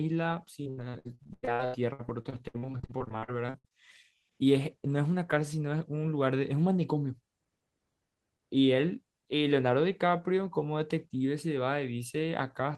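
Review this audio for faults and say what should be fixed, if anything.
From 0.63 to 3.73 s the speech breaks up with repeated packet loss, giving that robotic sound: dozens of short dropouts, the longest about 96 ms, each papered over by stretching the previous sound, so roughly a third of that stretch is patched-in filler. Worth fixing with a bigger jitter buffer, forward error correction or a steadier network path.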